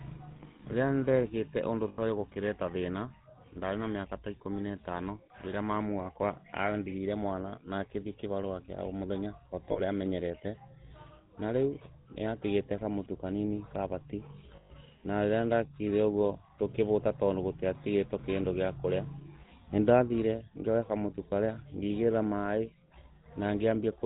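From start to end the speech carries the buzzy, gravelly roughness and dull sub-4 kHz band of the GSM full-rate codec, which fits its 13 kbit/s pulse-excited coding rather than simple low-pass filtering. Lost GSM frames at 1.88 s (100 ms), 9.72 s after "o mũthenya" (40 ms), 12.02 s between "na rĩu" and "nĩatigĩte kamũtu kanini kavati" (40 ms), and 14.56 s after "nĩatigĩte kamũtu kanini kavati" (140 ms) each hold a rough metallic ring. Unlike a clean dropout, the sound is never cut to silence.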